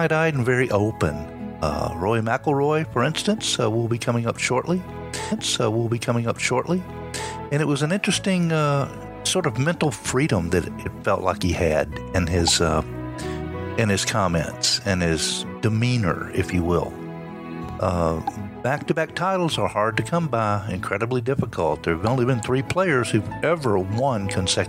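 At 5.31 s the audio jumps back with a small blip and plays roughly two seconds over again, running to 7.32 s before carrying on from where it left off. This is a stream segment repeated: the player fetched or queued the same chunk of the stream twice, so about 2.0 s of material is heard a second time and the whole programme is pushed later by that amount.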